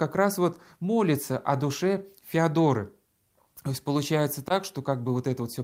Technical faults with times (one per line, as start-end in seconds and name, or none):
none